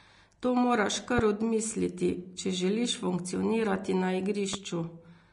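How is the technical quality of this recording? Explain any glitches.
The recording is technically compromised, with a hissy, band-limited tone throughout and two sharp pops.

Across the whole clip the speech sounds grainy and hissy, with softened consonant attacks and nothing above 10.6 kHz. This is likely Vorbis compression at a low setting, consistent with a bitrate around 34 kbps, where coarsely quantised treble turns fine detail into noise.

A loud pop hits at 1.19–1.22 s, just before "odmisliti če želiš funkcionirati", and another at 4.53–4.57 s, peaking roughly 15 dB and 10 dB above the speech. The likely cause is a brief voltage spike from a switch, plug or static.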